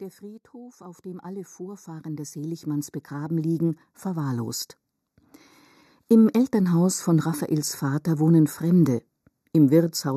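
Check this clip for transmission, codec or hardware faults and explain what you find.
Two faults stand out in this speech recording.

Throughout the clip the speech sounds hollow and phasey, with a fixed dip in the upper range. This is channel delay (comb filtering): one channel trails the other by a fraction of a millisecond, and when the two are summed to mono, the shared signal cancels at evenly spaced frequencies, starting around 3 kHz.

From 0.2 s to 4.6 s, the speech and the background noise swell together by about 17 dB. This is automatic gain rising: the gain control judged the input too quiet and gradually raised its gain over those four seconds.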